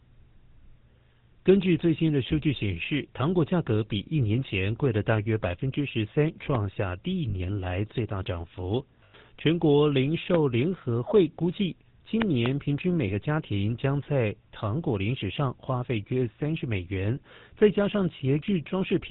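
The whole recording of speech carries GSM full-rate codec damage: a buzzy, gravelly roughness consistent with 13 kbps coding, with the spectrogram empty above 4 kHz.

Lost GSM frames at 7.30 s (40 ms), 9.04 to 9.15 s (100 ms) and 13.08 s (about 20 ms) hold a metallic ring of the last good sound. Each shows as smeared, repeating spectral bands.

A loud pop at 10.35 s, then two more between 12.22 and 12.48 s, likely comes from an electrical glitch. Each stands roughly 20 dB above the speech and shows as a sharp vertical spike in the waveform.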